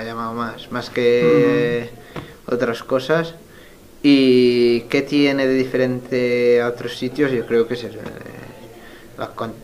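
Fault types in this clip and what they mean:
Nothing stood out on listening to this audio.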